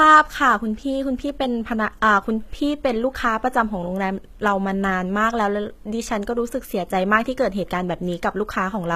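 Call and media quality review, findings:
Speech with leftover codec artefacts throughout and no content above about 14.9 kHz. Probable component: upstream source encode, not the final MP3 encoder. Low-bitrate audio saved at a high bitrate, likely a roughly 20 kbit/s HE-AAC pass later re-encoded to high-rate MP3. The second encode carries the first codec's losses and cut-off forward and cannot restore the removed detail.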